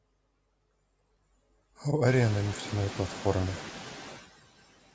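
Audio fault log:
Throughout: noise suppressor artifacts. The background drops by about 19 dB in the gaps and comes back under the speech. The suppressor lowers each band it judges to be steady noise, frame by frame. Room noise, rising about 25 dB near 2 s, is what it acts on.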